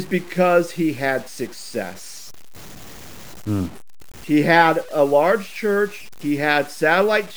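Throughout, the speech was likely truncated to 7 bits with no dither, a low bit depth without dither. The error follows the signal at only about 25 dB below it, so quiet syllables turn gritty and the faintest tails sputter or drop to silence.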